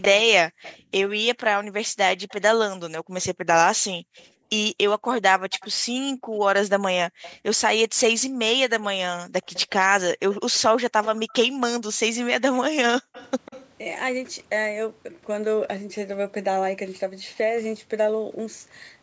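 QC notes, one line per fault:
0.02–0.77, 2.29–7.34 and 9.53–13.68 s, echo leak: a delayed copy of the speech trails about 146 ms behind, around 10 dB down at first, then around 20 dB down. That's likely a far-end speakerphone whose echo canceller let some of its own playback through.
0.24–0.28 and 12.92–12.98 s, speech suppressed in double talk: the talker briefly cuts out by about 40 dB while the echo is also present, likely because the canceller couldn't separate them and ducked both.
0.56–4.49 and 6.15–8.38 s, background gated by the echo canceller: the room sound drops by up to about 40 dB for roughly a second in the first stretch and under half a second in the second, as the canceller clamps the mic and then lets go.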